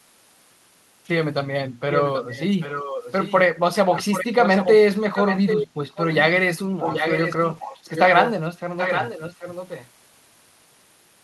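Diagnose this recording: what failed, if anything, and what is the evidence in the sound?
Call processing at the far end likely failed: a loudspeaker echo canceller let its microphone pickup through. An echo leak follows the speech about 0.78 s late, at 1.91–3.4, 3.95–4.76, 5.15–5.67, 6.0, 6.8–8.32 and 8.77–9.88 s, mostly only a few decibels below it, weakest at 6.0 s.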